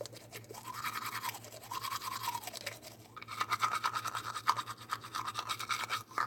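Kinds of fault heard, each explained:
No fault of any kind is audible anywhere in the recording.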